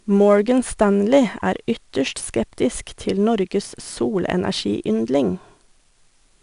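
4-bit ADPCM compression runs through the whole speech clip. Each sample is coded as a coarse 4-bit step from a prediction, so a gritty, level-following hiss rides on every loud syllable. Nothing reaches above 10.6 kHz, which fits a stream of about 88 kbps.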